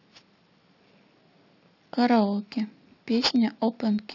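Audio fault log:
throughout: aliasing. The sample rate was lowered without a proper low-pass filter first, which fits a drop from 16 kHz to 12 kHz, so content between 6 kHz and 8 kHz reflected back below the 6 kHz band edge instead of being removed. These folded components sit roughly 15 dB under the speech at unrelated frequencies, giving sibilants a gritty, metallic edge and pushing energy hard up against 6 kHz.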